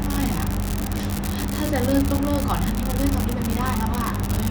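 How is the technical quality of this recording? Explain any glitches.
An unreliable data bit runs through the whole speech clip. One marginal bit in each sample flips at random, so every error adds a spike of the same size, about -8 dBFS. The result is a steady crackle and fizz that continues through the pauses as well.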